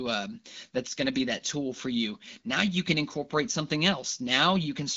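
No technical faults can be heard in this speech recording.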